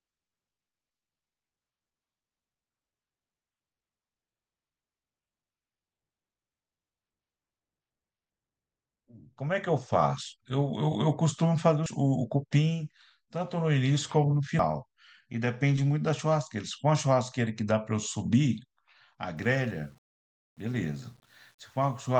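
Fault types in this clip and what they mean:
Dropped buffer (overrun): speech skips ahead without silence at 11.86 s and 14.59 s, losing roughly a tenth of a second each time, likely from overwritten unread buffers.
Low bit depth without dither: from 19.37 s to the end, error that tracks the signal sits about 40 dB below the speech, likely from 9-bit rounding without dither.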